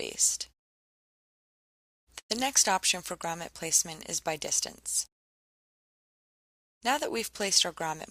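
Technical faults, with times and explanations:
2.19–2.32 s call audio freeze: sound smears into a fading buzz, then silence, likely an emptied jitter buffer. Unlike a dropout, audio resumes where it stopped, losing nothing.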